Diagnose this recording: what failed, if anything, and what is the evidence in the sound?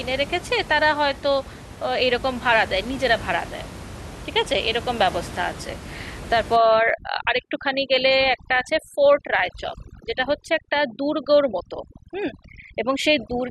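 From 6.56 s to the end, the background drops and breaks up into twinkling specks. Overdone noise removal in call processing is cutting every band near its noise estimate, stripping quiet speech detail with the room noise.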